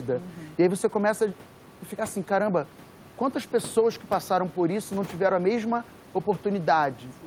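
No technical faults are audible in the speech, and the only background is the room noise of the recording space, sitting about 22 dB below the speech level, which belongs to the recording rather than to the system.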